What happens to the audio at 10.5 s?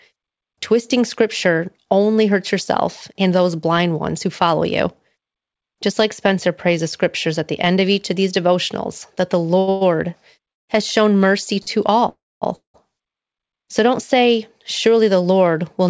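A call audio freeze from 10.51 to 10.70 s: a gap of near silence, likely a jitter buffer running dry, before "has shown mercy" resumes intact.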